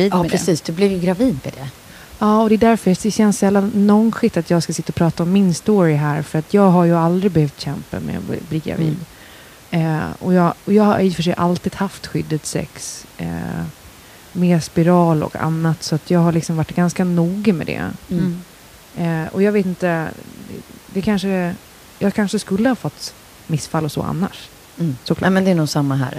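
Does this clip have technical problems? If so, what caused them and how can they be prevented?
No technical faults are audible in this speech clip, and the room's own background noise sits about 26 dB below the speech, so there is nothing to prevent.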